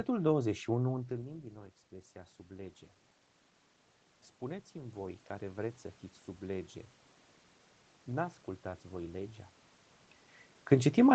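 Automatic gain rising, 1.89 to 2.86 s after "întâlnim din nou" and 4.72 to 5.86 s before "fiți sub lege": input dropped about 15 dB, so gain crept up about 3 and 4 dB, swelling voice and room noise together.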